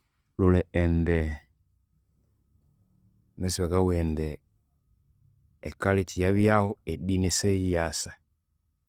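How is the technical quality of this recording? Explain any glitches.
Technical quality is poor, with two faults audible in the speech.

Opus compression runs throughout: tones sound noisy, rough and grainy, likely from Opus in music mode filling starved bands with folded or noise content, consistent with roughly 24 kbps.

Clock slip clicks run from 0.16 s to 8.84 s, faint regular ticks about every 0.1 s, likely single samples dropped or repeated between unsynchronised clocks differing by around 200 ppm.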